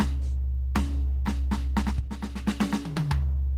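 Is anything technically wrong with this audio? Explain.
Yes, there are two playback faults in this music clip, both involving audio that was queued for playback.

At about 1.25 to 1.27 s there is a skip ahead. Roughly 0.4 s of the music was dropped because newer audio was already queued, and the two sides were spliced together with no fill. You hear the music lurch forward and a phrase lose its middle. On a waveform the envelope changes abruptly at one point. A spectrogram shows harmonic lines breaking off and restarting, with no silent gap between them.

From 1.82 to 2.10 s there is a jitter buffer speed-up. The buffer was running deeper than its target, so the receiver trimmed many small slices, each one or a few pitch periods long, to catch up. Around 50 ms was removed in total, so the passage plays at about 117% speed while the pitch stays the same. The rhythm briefly rushes and the tempo wavers. 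A spectrogram shows note onsets bunched closer together with the harmonic spacing unchanged. A zoomed-in waveform reveals tiny repeated seams where cycles were cut out.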